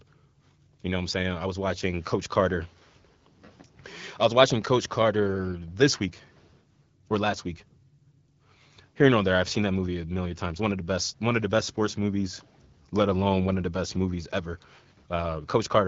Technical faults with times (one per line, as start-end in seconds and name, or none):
none